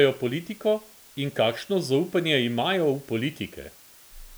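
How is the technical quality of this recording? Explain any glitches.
The recording is marred by one fault that runs from start to finish.

Low bit depth with dither, throughout: the speech has been stored with very few amplitude steps, which fits an 8-bit word length, and random dither was mixed in before each sample was rounded. That randomisation turns what would be gritty, signal-dependent distortion into an even, constant hiss. It sits roughly 25 dB below the speech, present under every phrase, but with no crackle or harshness on the voice itself.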